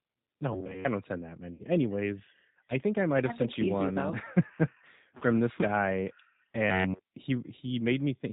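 Throughout, a G.729 codec at 8 kbit/s rebuilds the speech from a filter model and sparse pulses, leaving it band-limited below 4 kHz, rough and synthetic.

At 1.54 to 1.65 s and 5.17 to 5.24 s, VoIP packet loss concealed by the speech codec removes about 60 ms and 40 ms of audio, which fits three and then two lost 20 ms packets. Each time, the decoder extends the last sound into a fading buzzy tone or coloured noise, and the speech stays weakened briefly after it returns.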